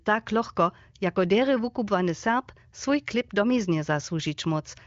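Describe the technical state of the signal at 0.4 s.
At 0.4 s the signal is intact, carried through the AMR wideband (HD Voice) codec at 23.05 kbit/s, with its band ending near 7.4 kHz.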